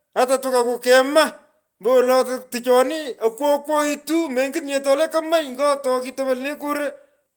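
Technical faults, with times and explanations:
No technical faults can be heard in the speech. Nothing here calls for a time or an explanation.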